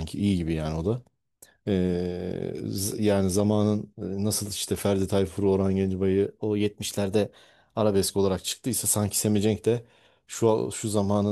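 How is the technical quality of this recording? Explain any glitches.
The speech has two glitches of the same kind, a drift correction step. From 0.94 to 1.48 s, and again from 6.27 to 7.95 s, the sound runs about 6.2% fast. Pitch rises by roughly a semitone, 104 cents, then snaps back. This is likely clock-matching software changing the playback rate in one jump to drain its buffer. Speed and pitch move together, so the voice sounds briefly hurried and detuned upward.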